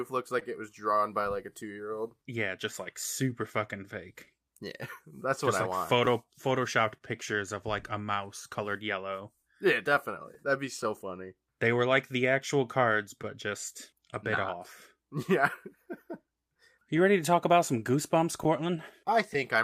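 Throughout the speech there is a faint, uneven unsteadiness in pacing, with tiny hiccups that never settle into a regular rhythm. This is clock drift between sender and receiver. The sender's clock runs roughly 2 percent slow, so the receiver's jitter buffer keeps draining. The receiver has to keep stretching the audio to stay fed, and at moments the buffer runs short altogether.

At 0.39 s, a sound is held a little too long, for about 19 ms, with a slight buzzy smear before the speech carries on from exactly where it left off. This is a short stall from a late packet. The packet missed its slot, the buffer ran dry, and the receiver extended the last sound until the packet arrived, adding about 19 ms of delay without losing anything.

From 1.22 s to 19.14 s, the speech runs at about 99 percent of its proper speed, with small repeated stretches that slightly loosen the tempo. These are repeated timing corrections. 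Because the sender is slow, the receiver keeps duplicating short pieces to avoid running empty. The corrections all go the same way, are unevenly spaced, and add roughly 200 ms over the span.

Between 2.84 s and 4.28 s, there are about four brief ticks and smears, none longer than about 10 ms. These are scattered short gaps: isolated late packets, each patched by continuing the preceding sound, so nothing is actually missing.

At 6.98 s, a second short stall from a late packet holds a sound for about 27 ms, giving a slight dip and buzz before the speech resumes intact.

Scattered short gaps return from 9.42 s to 10.87 s as about four small hiccups of up to roughly 10 ms. They come back again from 13.22 s to 19.36 s as about seven, the longest around 15 ms. In each case the receiver covered the hole by extending the last sound, so the speech stays clear apart from these faint blemishes.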